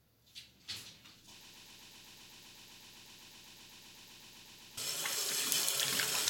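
A sound recording that falls into a broken-record loop from 1.45 s to 4.78 s: a fragment about 127 ms long repeats exactly, back to back, 26 times, and whatever should have played in that stretch is gone. The likely cause is a stalled player, encoder or stream resending its last buffered piece. Unlike an echo, the repeats don't fade or overlap, and unlike a dropout stutter there are no silent gaps between them.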